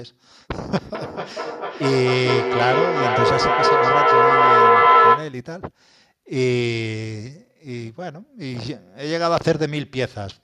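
From 0.73 to 5.41 s, feedback echo between two devices returns the speech roughly every 400 ms. Repeats build up, peaking about 7 dB above the speech.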